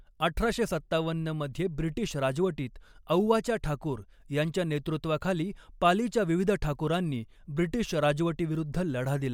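No technical faults can be heard anywhere in the speech.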